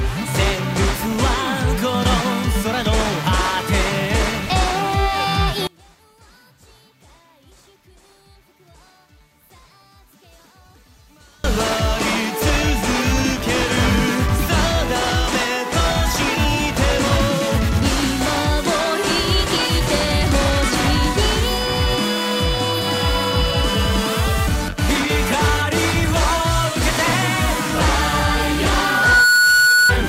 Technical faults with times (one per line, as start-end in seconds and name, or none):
5.67-11.44 one channel inverted
28.70-29.95 loudspeaker feedback squeal